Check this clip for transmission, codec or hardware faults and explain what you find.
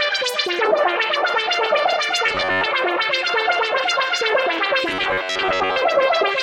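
Two stretches of robotic sound from repeated short buffers appear, from 2.26 to 2.67 s and from 4.89 to 5.82 s. In both, the sound turns into a rigid, metallic buzz pitched at 93.8 Hz, tracking the original only loosely. The likely cause is audio arriving too late: the playback side fills the gaps by looping a short segment of about 10.7 ms, and that repetition rate sets the buzz. Roughly two thirds or more of the real audio in those spans is lost.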